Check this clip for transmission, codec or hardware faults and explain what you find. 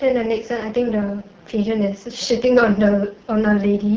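The speech has been through the AMR wideband (HD Voice) codec for its whole length, at a rate low enough to damage it heavily. Starved of bits, the codec's pulse-driven vocal tract model leaves the speech rough and raspy, which fits its lowest 6.6 kbit/s mode.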